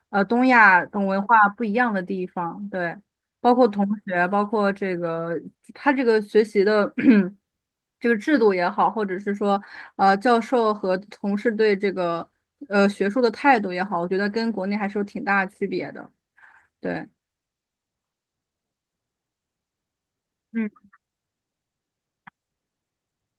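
No faults in this speech clip; it went through a call codec that tops out around 12 kHz, consistent with Opus at a moderate bitrate, with nothing further to flag.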